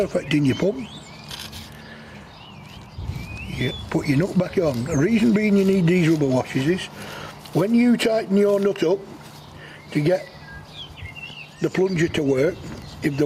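Gain pumping runs through the whole clip: the gain swings by about 5 dB, pulled down under each loud sound. The likely cause is input gain set far too high, with a fast limiter clamping every peak and squashing the dynamics.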